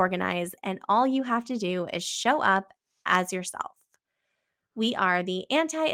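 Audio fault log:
Nothing stood out on listening to this speech clip.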